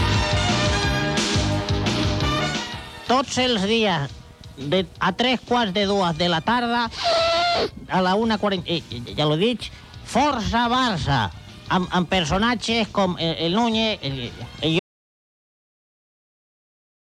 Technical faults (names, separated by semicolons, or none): audio dropout to silence